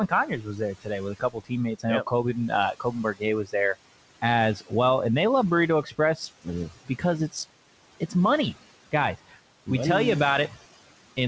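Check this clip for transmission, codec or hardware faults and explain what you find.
The faults come from noise suppression rather than the link itself. The audio passes through a call path whose band stops at 8 kHz, consistent with G.722 at 64 kbps, over room noise about 18 dB below the speech.

Noise suppressor artifacts run throughout. The background sinks between phrases and returns under the speech, because the suppressor lowers noise-dominated bands by about 17 dB frame by frame.

Speech cut by the noise suppressor occurs from 0.07 to 3.54 s, 4.56 to 4.73 s, 5.83 to 7.35 s and 8.92 to 9.68 s. Quiet parts sound swallowed, dropping by about 19, 13, 18 and 17 dB respectively, because the suppressor mistook them for noise. The first stretch is hit hardest, with around a second and a half affected.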